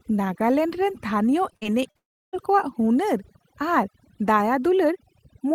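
Across the whole recording, the background sits at near silence with small twinkling specks of sound. This is overdone noise removal. A noise reduction stage was set too aggressively, so any frequency band close to its noise estimate gets pushed far down or switched off. The quieter parts of the voice fall below that line and are stripped out along with the noise.

From 1.53 to 1.97 s the sound turns choppy, with small pieces missing. This is repeated packet loss. Audio arrived late or not at all four times within that span, with the longest hole lasting about 47 ms. Each hole was patched by stretching out the sound that came just before it, and those patches total about 115 ms, roughly a quarter of the stretch.

Straight after, from 1.97 to 2.35 s, the last sound trails briefly into a fading buzz and then drops to near silence for about 0.32 s. When the audio resumes, that part of the speech is simply gone. 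This points to a long network dropout as the likely cause: nothing came through for over a third of a second, so the receiver extended the final sound as far as it could and then had nothing left to play.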